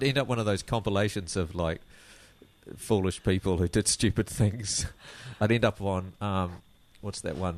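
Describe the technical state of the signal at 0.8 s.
Nothing at 0.8 s points to a fault; the signal is intact at that moment.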